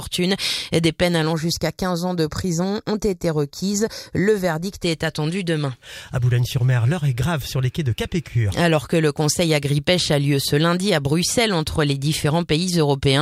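From 1.33 to 4.83 s the audio turns hollow and phasey, the signature of channel delay (comb filtering). One channel arrives a fraction of a millisecond late, and when the two are summed to mono, the shared content cancels at evenly spaced frequencies, with the first notch around 3 kHz and more repeating above it. A spectrogram shows fixed dark horizontal bands through that stretch.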